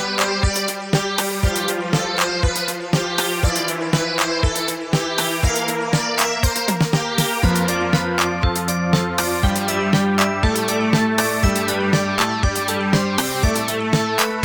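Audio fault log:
Nothing stood out on listening to this recording of sounds.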